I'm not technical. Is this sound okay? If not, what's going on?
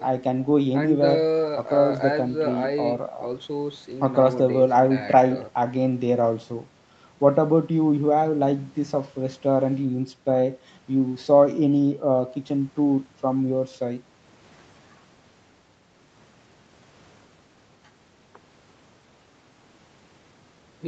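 Yes, nothing in this speech sounds wrong. It has the slightly muted top end of an ordinary online call, because the call path passes nothing above about 8 kHz.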